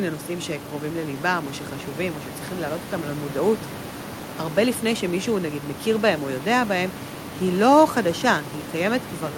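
There are no technical faults to describe in time order in this speech clip.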